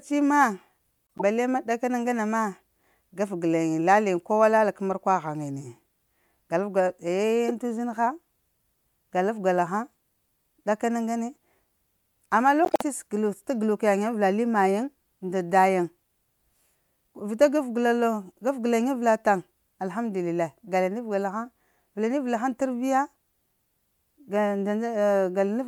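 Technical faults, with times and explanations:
1.18–1.22 s, 7.48–7.51 s and 12.65–12.82 s: corrupt frame decoded. Flipped bits in the compressed stream were decoded as if valid, so misread gains and spectral codes put energy in the wrong frequency bands for the span of each damaged frame. The result is a short squeaky burst, peaking around -15 dBFS for the first two and louder, about -10 dBFS, for the longest at 12.65 s. The bursts fall just before "bale mah da kana" and "sa ta galuk".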